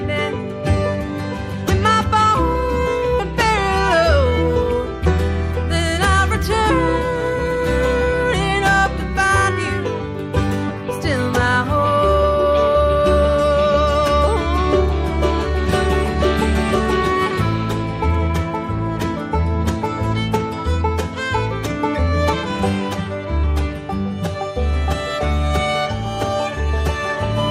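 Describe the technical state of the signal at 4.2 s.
At 4.2 s the receiver is in a jitter buffer speed-up, running from 3.94 to 4.32 s. Its buffer had built up more audio than its target, so it trimmed away short pitch-period-length slices one after another, cutting roughly 50 ms in total. Playback runs at about 111% speed with the pitch unchanged, so the sound briefly feels hurried and pressed forward before settling back to its normal pace.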